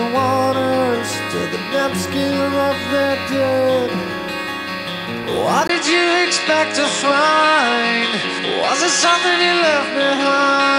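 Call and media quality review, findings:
From 5.67 s: 20 ms gap, then duller sound capped at 10.1 kHz, new noise floor about 45 dB down, level unchanged. Likely input switched to a poorer device.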